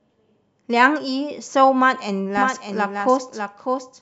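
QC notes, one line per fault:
2.37 s to end, doubled audio track: from 2.37 s a second full-band copy of the speech runs underneath the original, trailing it by roughly 0.7 s and sitting about 5 dB lower. The copy cuts in abruptly rather than fading up, carries no decay or added room colour, and stays locked at the same offset to the end of the clip. This is likely a second capture of the same signal through a slower path, or an edit that left two copies out of step.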